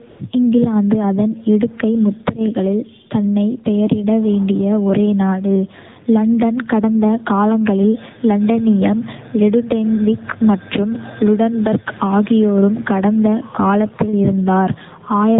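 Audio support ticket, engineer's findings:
AMR narrowband mobile codec across the whole clip: speech dull, nothing above 4 kHz, clearly buzzy and synthetic. Phone-network leg squeezing voice into a coarse vocal-tract model with few pulses per frame; damage level points to a low mode around 7.4 kbps.

AMR comfort noise from 0.10 to 0.20 s: real background drops out for 100 ms, swapped for smooth, steady hiss that cuts in and out. Sender's silence detection paused speech frames; receiver filled the gap with generated noise.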